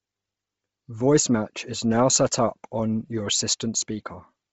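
From start to finish the speech carries a breathy, grainy edge, with nothing above about 7.7 kHz. That's likely Bluetooth LC3 compression squeezed hard: heavy damage consistent with a rate near 24 kbps and short 7.5 ms frames.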